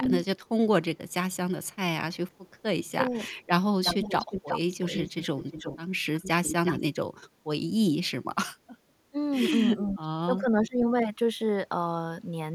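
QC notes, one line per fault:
0.38–0.49 s, 1.09–1.74 s, 2.31–2.62 s: echo leak, very faint copy of the speech arriving 388 ms late, about 40 dB down, likely a loudspeaker echo the far-end canceller missed.
3.05–3.20 s: speech suppressed in double talk, level dips about 10 dB for 150 ms while both sides talk, likely the echo canceller ducking both.
3.33–6.80 s: echo leak, a clearly audible delayed copy 358 ms behind, only about 10 dB under the speech, likely residual loudspeaker pickup passed back uncancelled.
4.02–4.15 s: speech suppressed in double talk, brief dip of about 5 dB lasting 100 ms during overlap, likely canceller attenuation confusing talker with echo.
9.76–10.87 s: speech suppressed in double talk, speech pulled down by up to about 15 dB, roughly 0.7 s affected in total, likely canceller over-suppressing during overlap.
9.83–9.95 s: echo leak, short echo scrap 358 ms delayed at about 25 dB below speech, likely residue escaping the far-end canceller.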